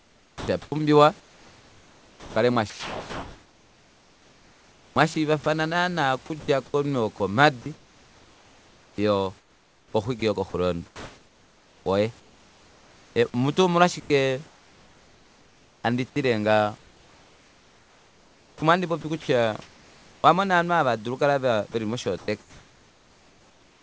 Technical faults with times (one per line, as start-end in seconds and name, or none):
0.00-5.46 sound chopped by the voice detector
6.26-13.16 sound chopped by the voice detector
14.00-15.84 comfort noise in place of the background
16.78-20.24 sound chopped by the voice detector
21.72-23.83 sound chopped by the voice detector